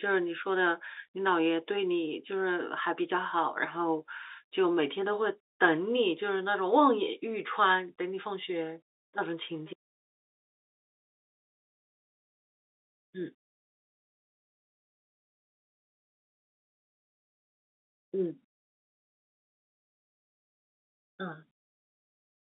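No technical faults detected.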